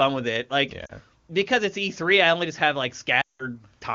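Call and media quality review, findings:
Lost AMR speech frames at 0.86–0.92 s and 3.21–3.45 s. Frames failed checksum; the decoder repeated the last pitch and vocal tract settings at falling gain. The first is a brief 60 ms gap, fitting about two frames, dropping to near silence. The second drops to near silence within two frames, across 240 ms. Weak or rough recovery after each. Wideband speech around the gaps is clear.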